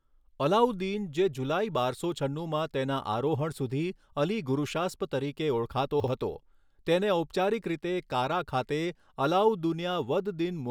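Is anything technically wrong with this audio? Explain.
Yes. At 6.0 to 6.08 s, just before "હતો તેને", there are chunks out of order. A 40 ms chunk plays one slot late, so the audio jumbles briefly. The three hard joins show as thin vertical lines on a spectrogram and as abrupt steps in the waveform.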